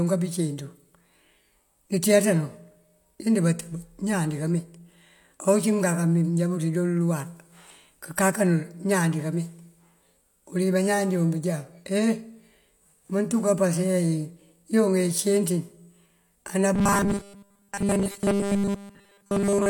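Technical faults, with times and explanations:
16.74 to 19.69 s, robotic sound from repeated short buffers: speech becomes a rigid, metallic buzz at 200 Hz. This is likely caused by audio arriving too seldom, so essentially everything is replaced by repeats of the last 5 ms. A spectrogram shows evenly spaced 200 Hz harmonic stripes, and the waveform shows identical repeating cycles.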